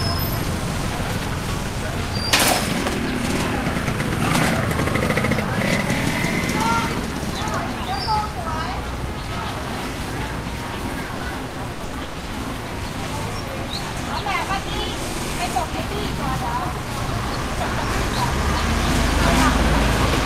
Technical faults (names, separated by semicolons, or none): repeated packet loss (robotic sound)